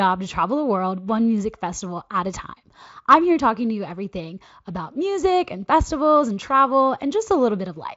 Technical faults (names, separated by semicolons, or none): none